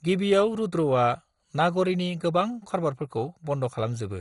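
Heavy MP2 compression, likely at a low bitrate around 56 kbps, has starved this speech clip of bits throughout, so the upper sub-bands are switched off above 11.2 kHz and the remaining bands are coarsely quantised, leaving the speech dull, gurgling and granular.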